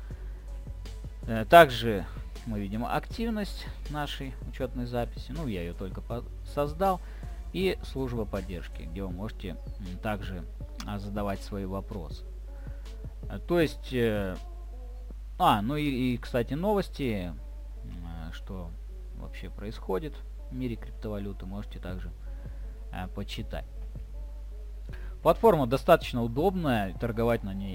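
A crude rate conversion runs throughout, with the audio moved from 32 kHz to 44.1 kHz by simply repeating nearest samples instead of filtering. The resulting error, roughly 30 dB below the signal, adds a gritty, inharmonic fizz that tracks loud and high-pitched sound.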